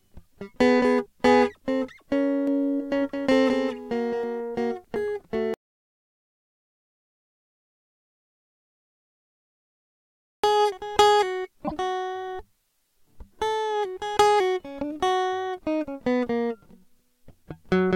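A music clip with three separate faults. From 2.47 to 4.23 s there is a doubled audio track. A second full-band copy of the music runs roughly a fifth of a second behind the original and sits a few decibels lower. It carries no reverb or room colour, so it reads as a hard echo. It also begins and ends abruptly at those two points. This is likely an edit holding two out-of-step copies, or a slower capture path mixed back in. Next comes an audio dropout to silence, from 5.54 to 10.44 s. The music cuts off mid-flow, and nearly 4.9 s is simply gone. The gap is silent, with no room tone under it. The music then resumes abruptly. The likely cause is a lost input, such as a disconnected device or a failed link, while the recorder kept writing silence. At 11.67 to 11.72 s there is a broken MP3 bit reservoir. The music jumps forward, and a short disturbance of about 56 ms follows. That span matches two MP3 frames of about 26 ms each. 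Frames were likely cut from the stream. The next frames then reached back into the reservoir and decoded bytes from the wrong frame.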